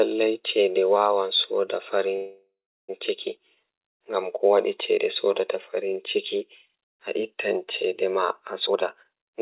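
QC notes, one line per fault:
2.16–2.90 s, call audio freeze: the sound stops advancing and the last fragment is drawn out as a fading buzz that decays into roughly 0.37 s of silence before the audio resumes exactly where it left off. This likely comes from packets stalling in transit and the jitter buffer running dry, so the receiver invented filler. About 0.72 s of gap is added, nothing is lost, and the stream now runs that much later.
8.6–9.41 s, jitter buffer speed-up: the closing stretch plays at about 160% speed with its pitch unchanged, so it sounds rushed and clipped. Having built up more delay than it targets, the receiver cut out many tiny pitch-period slices in quick succession to catch up, shedding roughly half a second. The audio here is band-limited, with nothing above 4 kHz, which fits the G.711 mu-law call codec.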